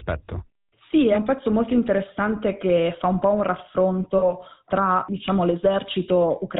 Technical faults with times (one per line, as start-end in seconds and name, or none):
0.00-6.60 GSM full-rate codec
4.18-4.31 lost GSM frames